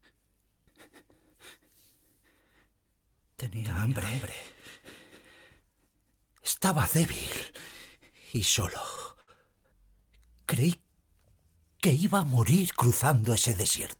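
From 3.64 to 5.30 s there is a doubled audio track: a second full-band copy of the sound trails the original by roughly 300 ms, about 5 dB quieter, likely from the same signal arriving again through a slower path. It has no reverberant tail or room colour, and it starts and stops abruptly. On a spectrogram every feature in that span reappears as a fainter, identical shadow shifted right by a fixed gap. The waveform shows overlapping, offset envelopes with hard edges at both ends.

Two short stalls from a late packet follow. The first, at 8.95 s, holds the sound for 16 ms. The second, from 9.21 to 9.30 s, holds it for 63 ms. Each time a packet arrived late, the jitter buffer ran dry, and the receiver stretched the last fragment until the data turned up, then resumed from the same point. Nothing is lost, but the sound briefly hangs with a faint buzz or dip, and everything after it runs 16 ms and then a further 63 ms late. 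A spectrogram shows short stretches of frozen, horizontally smeared energy, and the waveform shows a repeated, flattened cycle pattern at those moments.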